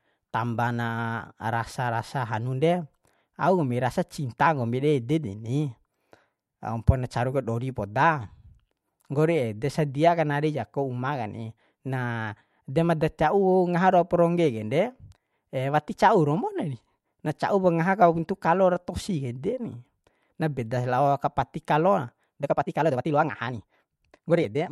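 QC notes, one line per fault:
22.36 to 24.71 s, time-stretched section: the speech suddenly runs about 1.66 times faster right through to the end, yet the pitch stays put, so it comes across hurried rather than chipmunky. That's the giveaway that this wasn't simply played faster. Software likely squeezed this stretch to fit a shorter slot, keeping pitch by dropping short slices of the audio.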